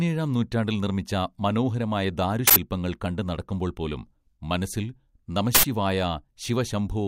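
At 2.48 s, just before "കണ്ട് നടക്കുമ്പോൾപ്പോലും മനസ്സിൽ", and again at 5.55 s, an uninitialised buffer plays leftover memory as an 85 ms burst of digital noise, which fits a 4096-sample block. Each shows as a tall rectangular slab on the waveform and a broadband vertical stripe on the spectrogram.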